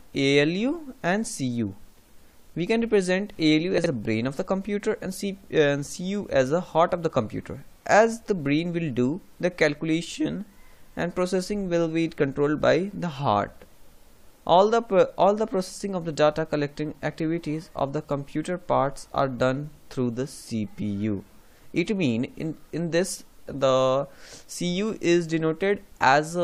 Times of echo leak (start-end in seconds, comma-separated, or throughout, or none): none